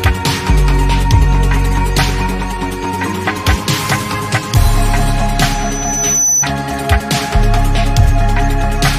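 At 5.52 s a loudspeaker feedback squeal starts: the mic is catching its own speaker, and the loop runs away at 6 kHz. That thin tone swells for most of a second until it's about as loud as the sound itself, then cuts off at 6.47 s.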